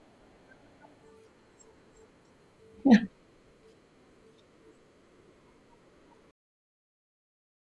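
A speech recording with nothing technically wrong with it.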